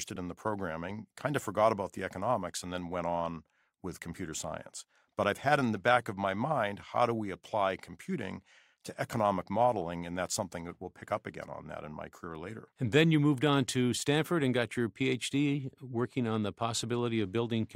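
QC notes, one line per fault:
1.19–1.24 s, one channel drops out: one side of the stereo pair likely went silent for 50 ms. In the mono sum, everything common to both channels falls abruptly by about 6 dB, a brief dip in the speech before it snaps back.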